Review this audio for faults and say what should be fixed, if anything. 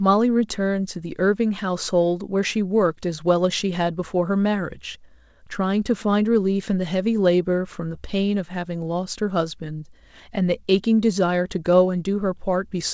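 Nothing here needs fixing; no faults are audible.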